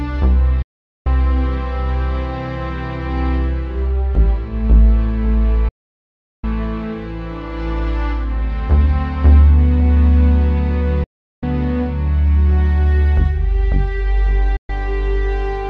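The sound drops out four times with a digital broadcast dropout: at 0.62 to 1.07 s, 5.68 to 6.44 s, 11.03 to 11.43 s, and 14.56 to 14.70 s. Each time the receiver lost good frames and muted with a fast 8 ms fade, then picked up later in the programme.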